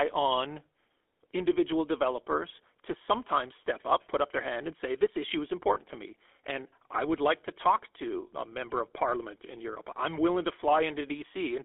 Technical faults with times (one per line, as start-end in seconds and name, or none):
0.00-11.65 GSM full-rate codec
5.74-5.77 lost GSM frames